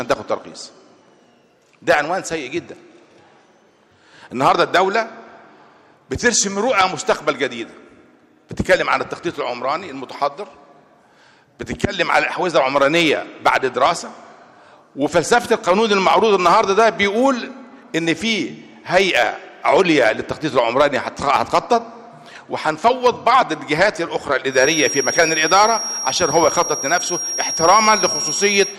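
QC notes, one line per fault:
24.47–28.78 s feedback whistle: thin 5.6 kHz tone slightly below the sound, likely a speaker-to-mic loop near feedback; flat horizontal spectrogram line.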